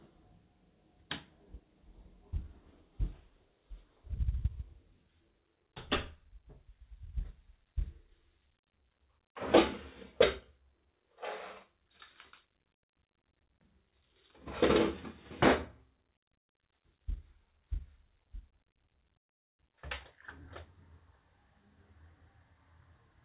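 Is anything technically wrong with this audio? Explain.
No, nothing technically wrong can be heard here.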